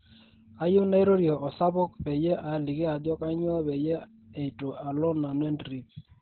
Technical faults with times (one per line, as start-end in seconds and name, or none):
0.00-6.21 Opus voice compression